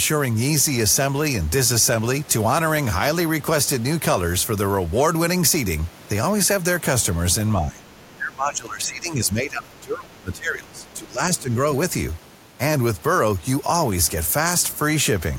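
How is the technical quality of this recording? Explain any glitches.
The recording has clear problems in the middle, where two people talk at once and the echo control struggles.

From 7.66 to 7.88 s, and again from 8.16 to 11.51 s, the speech is suppressed in double talk. The level dips by around 15 dB in the first stretch and up to around 20 dB in the second, which lasts about three seconds. The likely cause is an echo canceller that heard both sides together. It could not tell its own talker from the loudspeaker echo. So it turned everything down.

From 8.0 to 8.16 s, the other side's voice leaks through. It is a brief, very faint scrap, roughly 35 dB below the main speech. It likely comes from the far end playing on the talker's loudspeaker and reaching the microphone. The echo canceller did not remove all of it, so a trace of that second voice slips into the recording.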